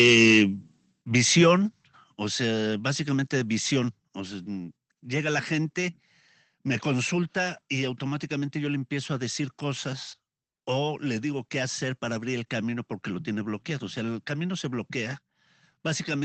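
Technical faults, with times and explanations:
1.02 s, microphone volume stepped down: the call software likely judged the input too loud and lowered the device's input volume in one step, so speech and background noise both drop by about 6 dB together and stay at the lower level.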